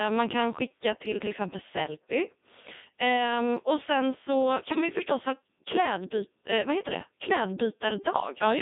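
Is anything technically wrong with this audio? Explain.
Yes, two things. Throughout, this is Codec 2 vocoder audio, at 3.2 kbit/s judging by the sound, squeezed into roughly 200 Hz to 3.7 kHz. Codec 2 doesn't keep the waveform. It sends pitch, voicing, energy and a rough spectral shape, and the decoder rebuilds the speech from sine waves. The damage here is heavy: the voice comes out buzzy and robotic, with that synthetic edge.

Then from 4.72 to 4.81 s there's a short burst of bit errors on digital voice radio, the kind you get at the edge of coverage. A fair share of bits got flipped, on the order of one in twenty. In a vocoder this lean, each bit helps set a whole frame's pitch, level or tone colour. That stretch, which points to about four frames, lurches into a warbly, bleepy garble.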